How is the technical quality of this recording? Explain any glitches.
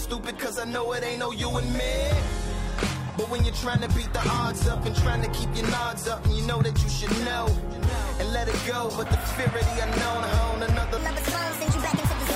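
The recording has two audible glitches, both in stretches where the quality suddenly shifts.

Adaptive stream at a lower bitrate, 2.79 to 6.79 s: the stream switched to a cheaper encoding when the connection slowed, which fits a drop from roughly 96 kbit/s AAC to 20 kbit/s HE-AAC. Nothing remains above 14.9 kHz, so the treble drops, with no gap at either switch.

Section at the wrong speed, 10.97 s to the end: the sound plays 1.4 times too fast, so pitch and tempo rise together, by roughly five semitones. It turns high and hurried at once. The likely cause is a player or editor fitting this segment to the wrong clock.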